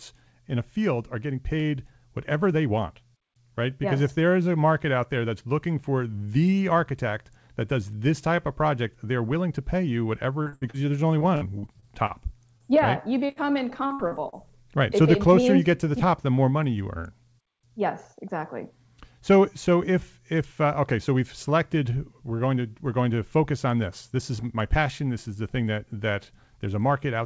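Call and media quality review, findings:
Repeated packet loss (robotic sound), speech over G.722 call path, band ends at 8 kHz. Jitter buffer starved in bursts at 10.43–10.77 s after "willing to pay you" (nearly half concealed), 11.19–12.13 s after "there's only", 13.87–14.35 s. Gaps up to about 60 ms, each patched by extending the last sound, giving choppy speech with pieces missing.

Short concealed packet loss, same path, jitter buffer and decoder concealment. Single holes of about 30 ms at 12.58–12.63 s, then two back-to-back at 13.26–13.32 s and 13.32–13.39 s after "right you". Last sound is stretched and blended back, heard as a brief smear or wobble.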